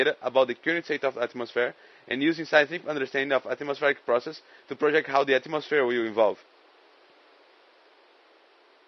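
From start to finish the speech has a rough, grainy texture, with a hiss-like fill sitting between the harmonics and a top end that sounds thinned and a little synthetic. That's likely low-delay AAC compression, the AAC-ELD kind used in video calls. At low bitrates it leaves noise between the harmonics, and the damage here is plainly audible, which fits a bitrate around 32 kbps. The room noise underneath sits about 34 dB below the speech.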